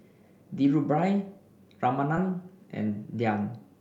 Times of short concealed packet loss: 2.15-2.19

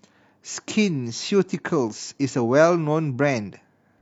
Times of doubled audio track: none

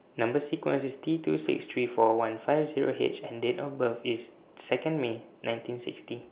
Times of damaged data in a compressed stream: none

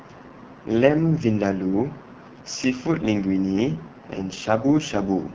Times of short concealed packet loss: none

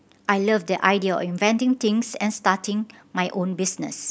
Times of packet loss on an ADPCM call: none

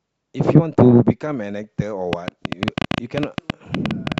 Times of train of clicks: 2.13-4.19

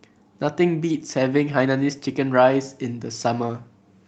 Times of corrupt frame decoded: none

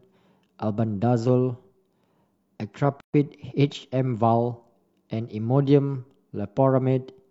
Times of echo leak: none

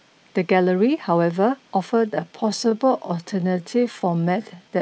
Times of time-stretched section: 1.82-4.81

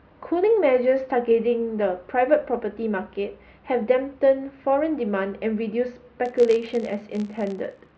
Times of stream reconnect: none

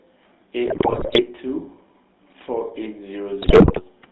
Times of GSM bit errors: 0.66-1.22, 3.42-3.81

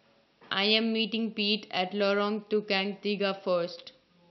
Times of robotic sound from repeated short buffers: none

